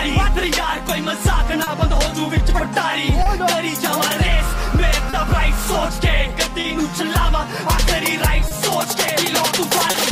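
A faint, uneven timing unsteadiness runs through the whole clip, as if the sound keeps catching its breath and then moving on. This is clock drift between sender and receiver. The sender's audio clock runs roughly 2 percent slow compared with the receiver's, so audio arrives a little more slowly than it is played out. The jitter buffer keeps draining.

Six brief moments where the sound hangs slightly too long, with a soft buzz or dip, occur at 1.64, 3.23, 5.10, 6.61, 8.48 and 9.91 s. Each is a short stall from a late packet, lasting about 60 ms. The buffer ran empty, so the receiver stretched the last sound to fill about 30 ms and then resumed from the same point. Nothing is skipped, but each stall adds about 30 ms of delay.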